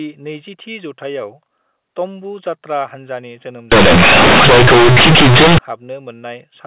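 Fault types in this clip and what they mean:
Companded audio read as linear: A-law bytes played as plain 8-bit samples without expansion turn the speech after "जात्रा हानजानि जोनोम" into loud, buzzy distortion with noisy pauses.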